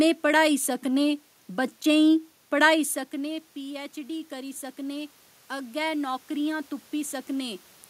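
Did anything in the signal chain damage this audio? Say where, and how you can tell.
Yes, at the call-processing stage: automatic gain rising from 3.11 s to 7.58 s. Just before it, around two and a half seconds in, the talker drifts away from the mic and the input drops by about 14 dB. The AGC sees that and pushes its gain up by about 7 dB over those four-odd seconds. You can tell it's the processor, not the talker, because the room noise swells right along with the voice.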